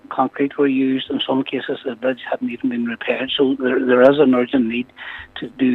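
The signal carries no dropouts, glitches, distortion or other technical faults at any point.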